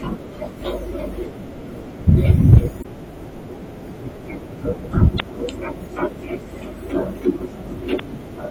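Throughout, the speech sounds watery and swirly, with metallic chirps on s sounds. That is likely MP3 compression at a low bitrate, which fits about 64 kbps.

From 2.09 to 2.58 s, peaks are cut flat by hard clipping. The signal overdrives a stage by about 4 dB, adding harmonics far up the spectrum.

At 2.81 to 2.86 s, 5.16 to 5.21 s and 7.96 to 8.00 s, short disruptions reveal damaged data in a compressed stream. The decoder loses sync each time.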